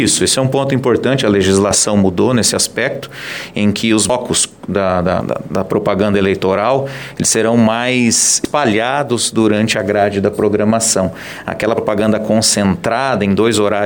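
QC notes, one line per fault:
4.10 s, 5.21 s, 8.45 s and 11.78 s, dropped buffer (overrun): at each point the sound jumps suddenly forward, with no silence in between. Roughly a third of a second goes missing at 4.10 s and 5.21 s, and about a tenth of a second at 8.45 s and 11.78 s. The likely cause is that the capture side fell behind and its buffer was overwritten. Unlike an underrun, nothing is padded or repeated; the audio simply splices shut.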